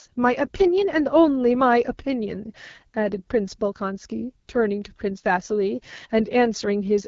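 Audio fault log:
throughout AMR wideband (HD Voice) codec: speech sounds rough and raspy with a hissy top band, which fits AMR-WB starved of bits near 8.85 kbit/s.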